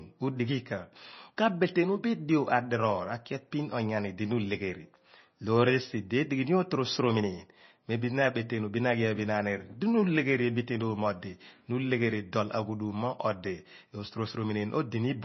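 Speech, likely squeezed through heavy MP3 compression at a low bitrate near 24 kbps, throughout: nothing sounds above 5.9 kHz, and the sound turns watery and swirly, with smeared attacks.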